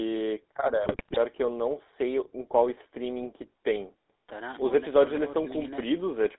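GSM full-rate codec damage runs through the whole recording. The speech is rebuilt from a vocal-tract model driven by sparse, regularly spaced pulses, so it carries a plainly audible buzzy, gravelly roughness, and the line band stops near 3.7 kHz, which fits 13 kbit/s full-rate coding.

GSM bit errors strike from 0.84 to 1.17 s. Corrupted bits reaching the decoder scramble the filter, pitch and gain values, so the spectrum bends and the level jumps from frame to frame. The speech breaks into squawks, pops and gargling, which suggests an error rate of a few percent across about sixteen frames.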